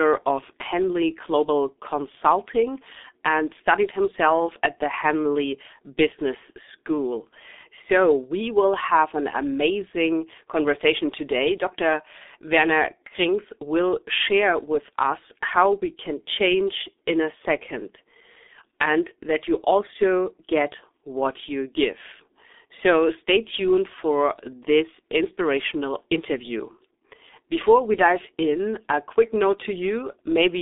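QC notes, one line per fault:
throughout, G.723.1 codec: the speech is squeezed into a narrow 250 Hz to 3.6 kHz line band, with nothing above 3.7 kHz, and coded at 6.3 kbit/s. The long frames and slow voice-model updates leave it heavily muffled and hoarse, with smeared consonants.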